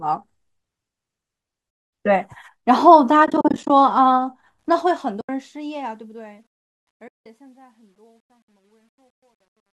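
A speech clip with soft-edged dropouts at 1.70–1.93 s (230 ms), 3.26–3.70 s (220 ms of gaps scattered across 440 ms, none much longer than 40 ms), 5.21–5.29 s (80 ms) and 7.08–7.26 s (180 ms). This is AAC frame loss with muting, likely from a low-delay AAC stream whose lost frames, about 10 ms each, were decoded as silence. On the waveform these appear as tapered holes, and on the spectrogram as blank vertical gaps across all frequencies. The smooth fade-out, running from about 4.6 s to 9.73 s, also shows truncation distortion on a fade from 4.59 s onward. The fade stage keeps too few bits, consistent with roughly 11-bit output without dither, so the quiet tail turns gritty. It is worst from 6.8 s to the end, where the waveform breaks into square steps, with broadband grain smeared across the spectrogram.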